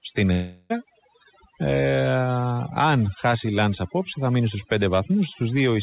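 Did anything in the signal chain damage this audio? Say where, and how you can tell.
Yes. Overdone noise removal during call processing affects the whole clip. Pauses drop to near silence with twinkling specks, unlike steady codec noise.

From 0.32 to 0.72 s, a fading buzz or hiss stands in for speech that resumes with material missing. This is likely a long network dropout, not a short glitch.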